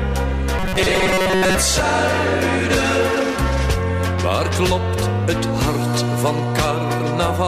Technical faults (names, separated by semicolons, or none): robotic sound from repeated short buffers